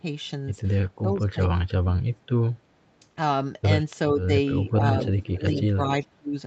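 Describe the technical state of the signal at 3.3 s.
At 3.3 s the speech is intact, with no dropout, click, distortion or other fault in the signal at that moment.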